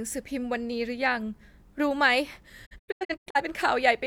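From 2.65 s to 3.40 s the speech breaks up in a digital broadcast dropout. The receiver stopped getting valid frames and muted its output, so the audio falls away in a series of short holes rather than one gap. About 384 ms of sound is missing, spread across roughly 680 ms, with the longest silent stretch near 85 ms. Each mute ramps down over about 20 ms, and whatever was transmitted during the holes is gone.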